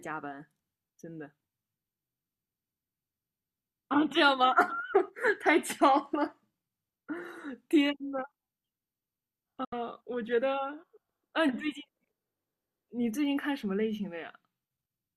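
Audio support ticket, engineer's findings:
Digital broadcast dropout, 9.64 to 9.73 s. Speech mutes via a quick 8 ms fade, then a 72 ms silent hole. Receiver muting on lost signal or failed frame checksums; gap length fits roughly three lost frames. Unlike network packet-loss concealment, no smeared or repeated sound fills the hole. Unlike a buffer stall, speech resumes further on without a pause-and-continue, so the missing audio is gone.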